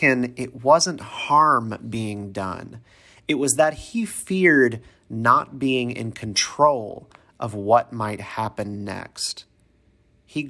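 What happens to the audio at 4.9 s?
Nothing happens at 4.9 s: the speech runs through that moment intact, with no dropout, click, distortion or other fault.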